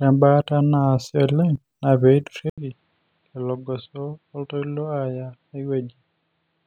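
At 2.50 s, after an 80 ms gap, speech turns dull above 4.7 kHz and roughly 10 dB quieter with new background noise: likely an input switched to a poorer device, not mere filtering.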